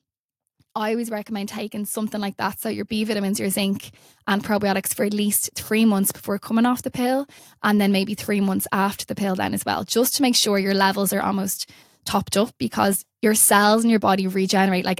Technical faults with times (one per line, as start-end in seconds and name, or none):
0.74-3.55 automatic gain rising